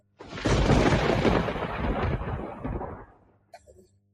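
A speech-oriented noise suppressor applied to music or sounds runs across the whole clip, misreading steady content as noise and swinging its level by around 20 dB, so the sound pumps and thins. Sound is cut by the noise suppressor from 0.00 to 0.34 s and again from 2.92 s to the end at 4.13 s, each dropping by about 16 dB as held material and decays are pulled down.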